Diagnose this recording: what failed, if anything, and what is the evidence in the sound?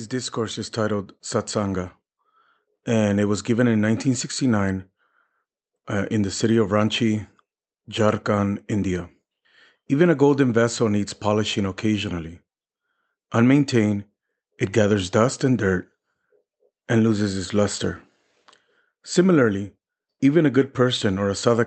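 Automatic gain rising in call processing: the AGC found the input quiet, so from 0.1 to 1.97 s voice and background swell by about 5 dB. This is one slow ramp, unlike syllable-rate compressor pumping.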